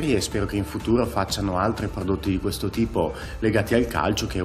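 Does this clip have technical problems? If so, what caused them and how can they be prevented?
No, nothing in this one needs fixing, so there's no cause to track down and nothing you'd need to do differently next time.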